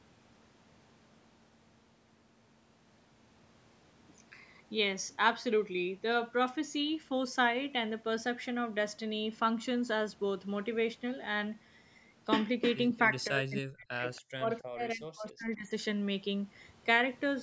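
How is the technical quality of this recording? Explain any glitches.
The recording has call-processing glitches in its final seconds, with audio band-limited to 8 kHz by the call's microphone processing. From 13.1 to 14.04 s and again from 14.32 to 15.71 s, speech suppressed in double talk: the voice drops by roughly 40 dB in patches, likely the echo canceller attenuating both sides during overlap. At 14.16 to 14.21 s, a brief echo leak: a faint copy arrives 277 ms late, about 30 dB down, likely residual loudspeaker echo escaping cancellation.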